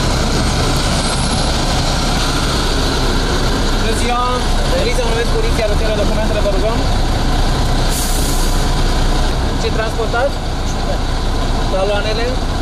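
At 2.09 s, 3.48 s and 10.96 s the sound jumps abruptly, skipping ahead rather than pausing. The first two each lose roughly 150 ms and the last about 50 ms. There is no gap of silence, which separates this from a dropout, and the likely cause is a dropped buffer (overrun): samples were overwritten before being read, so the audio on either side is butted straight together.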